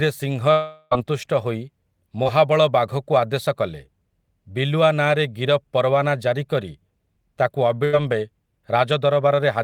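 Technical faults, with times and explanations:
0.51–0.93 s, long network dropout: for about 0.4 s the sound is replaced by a continuation of what came just before, a held buzz or hiss with no silence in it. Then the audio resumes further on. The likely cause is roughly 400 ms of audio that never arrived, with the receiver filling the whole gap.
2.23–2.27 s, short concealed packet loss: a brief smear or wobble lasting a few hundredths of a second. About 20 ms of audio missed the decoder, and roughly 15 ms of the last sound was extended to cover the hole before blending back into the real signal.
7.85–7.95 s, burst of packet loss: about 80 ms of consecutive audio was lost or arrived too late to play. The receiver stretched the preceding sound across the gap for about 80 ms and faded it, producing a short held buzz or fading hiss. The audio then picks up beyond the missing section.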